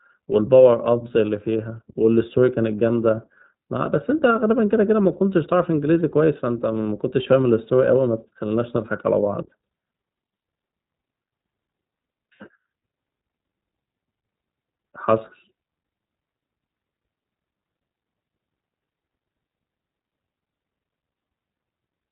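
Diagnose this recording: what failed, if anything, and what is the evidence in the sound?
Codec stage, throughout: iLBC codec damage. Nothing above 3.8 kHz survives, and the speech has a rough, synthetic texture that simple low-pass filtering wouldn't add.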